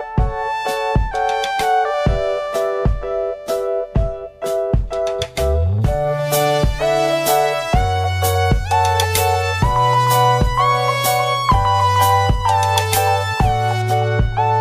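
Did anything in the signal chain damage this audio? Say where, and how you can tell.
Yes. Pre-emphasis was left on from 5.82 s to 13.82 s, where the audio abruptly turns thin, bright and hissy-edged, then returns to normal balance. The treble lift follows the 75 µs FM emphasis curve, rising to about 14 dB at 10 kHz relative to 1 kHz. That points to the receive or playback stage: the boost applied for transmission was never undone by the matching de-emphasis filter during that stretch.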